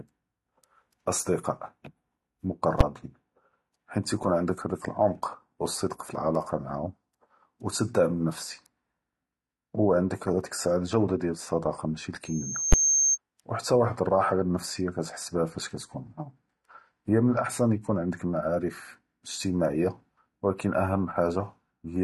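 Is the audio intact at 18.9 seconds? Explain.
No. AAC compression runs throughout, so 18.9 s is affected. Nothing sounds above 13.4 kHz, and the speech sounds dull and fizzy, likely from a low bitrate near 32 kbps.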